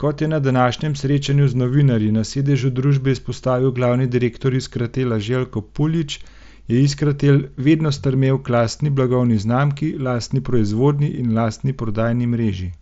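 No technical faults can be heard anywhere in this speech clip.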